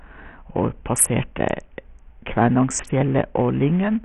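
Throughout the speech, the treble is heavily damaged: nothing above 12 kHz, gritty, flickering highs. This is likely Bluetooth SBC compression, starved at a bit pool that fits roughly 48 kbps.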